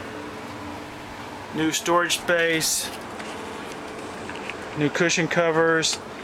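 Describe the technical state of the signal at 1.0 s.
Repeated frames, 0.90 to 1.06 s: a 78.4 ms block replays twice, adding 157 ms, heard as a stutter.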